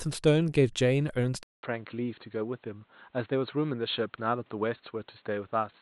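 At 1.43 s there's a gap of about 200 ms, and from there to the end the speech goes dull and boxy, with nothing above 4.3 kHz, a few dB quieter, plus a new noise floor well below the voice. That's likely an input switched to a poorer device.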